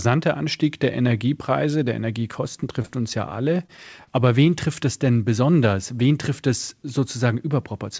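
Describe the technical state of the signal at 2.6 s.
At 2.60 to 2.64 s there is a short concealed packet loss. About 20 ms of speech arrived too late, and the receiver extended the preceding sound before crossfading back, giving a brief smear or wobble. The waveform shows a stretch continued from the preceding sound, and the spectrogram shows nothing above the 8 kHz cutoff of the G.722 path.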